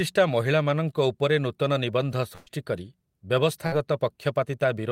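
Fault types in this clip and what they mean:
Burst of packet loss: a short run of audio never arrived, so the receiver stretched and faded the last sound to cover it, then jumped ahead. About 120 ms goes missing at 2.35 s, right after "ମହିଳାମାନଙ୍କ ଉପରେ ନୂତନ ନିବନ୍ଧ", and about 60 ms at 3.66 s.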